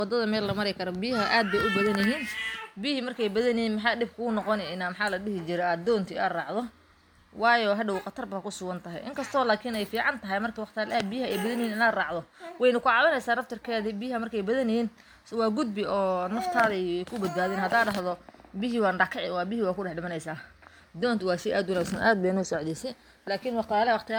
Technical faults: generation loss

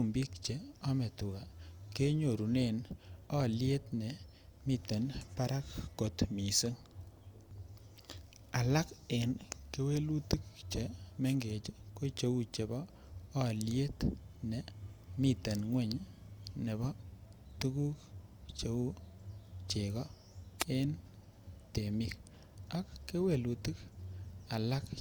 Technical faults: wireless microphone noise hit

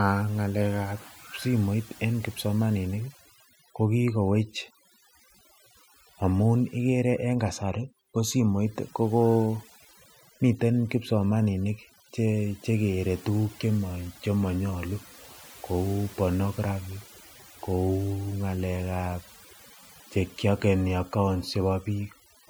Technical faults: overdone noise removal

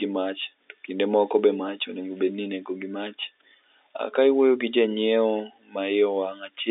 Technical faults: none

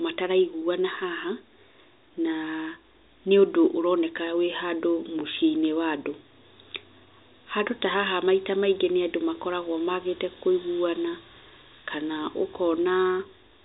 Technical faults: none

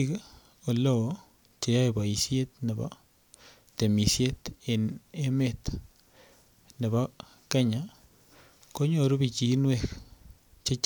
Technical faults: none

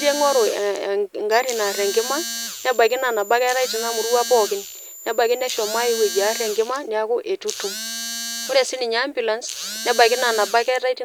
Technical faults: switching supply whistle

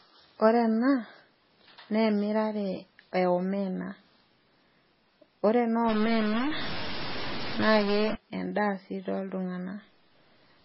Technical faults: MP3 compression; stuck bit

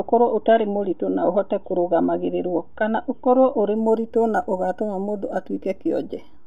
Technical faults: imaging from linear upsampling

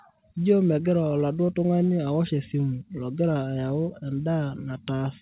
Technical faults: none

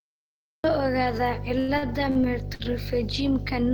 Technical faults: mains hum; cut-off start; repeated stalls (stutter)

